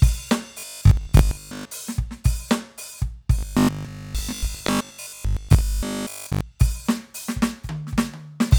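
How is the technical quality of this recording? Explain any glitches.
The music gets hit twice by robotic sound from repeated short buffers, from 0.59 to 1.73 s and again from 3.39 to 6.41 s. Both times a rigid, metallic 50 Hz buzz sits over the music while it still loosely tracks the original. The likely cause is audio arriving too slowly, so playback keeps looping a 20 ms chunk to fill the gap. That loop rate sets the fixed pitch, and most of the real material in those stretches gets skipped.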